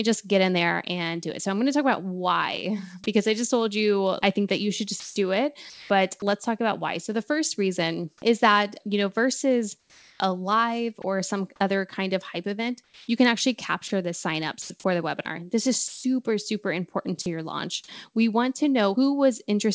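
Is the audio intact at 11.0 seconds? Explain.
No. At 11.02 to 11.04 s, between "know versus a live" and "some other kind of", 20 ms of sound gives way to steady hiss, likely sound dropped by the voice detector. That hiss is comfort noise standing in for sound judged to be background, rather than a glitchy repeat or a hard silence.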